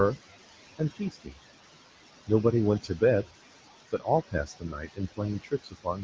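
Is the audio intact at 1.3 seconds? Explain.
No, 1.3 s falls inside a stretch from 0.99 to 1.33 s where there's speech cut by the noise suppressor. The suppressor mistook part of the speech for background noise and turned it down along with the background, by about 18 dB at its deepest. Altogether around a fifth of a second gets hit, so bits of the speech there come across swallowed and faint.

On top of that, noise suppressor artifacts run through the whole clip, including this moment. The suppressor is pulling the steady background down by about 19 dB frame by frame, so the noise dips in the gaps and comes back up underneath the speech.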